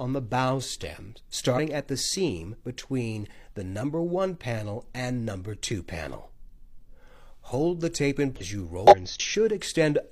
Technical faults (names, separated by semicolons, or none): damaged data in a compressed stream